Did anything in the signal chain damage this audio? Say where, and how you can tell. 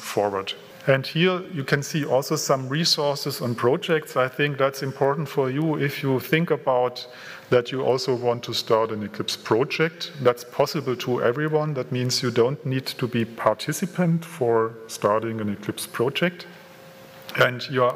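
Yes. From 7.88 to 9.93 s and from 14.05 to 15.88 s, the audio slows by 6.1% and drops 110 cents, just over a semitone, then snaps back. This is likely a drift correction step at the buffer stage, lowering playback rate to rebalance clocks.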